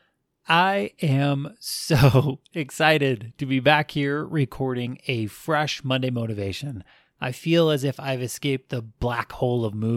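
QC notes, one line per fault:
No faults heard in this clip.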